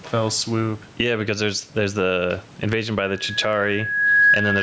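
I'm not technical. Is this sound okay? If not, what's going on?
No. Two things are wrong.

The first is gain pumping, heard all the way through. The likely cause is that the microphone's level was set far too high, so an automatic limiter keeps pulling the volume down every time the speech gets loud. The level swings noticeably, and the speech sounds squashed and flat.

The second is loudspeaker feedback squeal, starting at about 3.04 s and continuing until the clip ends. The microphone is picking up the loudspeaker it feeds, and the sound loops around, getting louder each time at one particular pitch, here about 1.7 kHz. That tone grows by itself over roughly a second and a half into a piercing whistle that ends up louder than the speech.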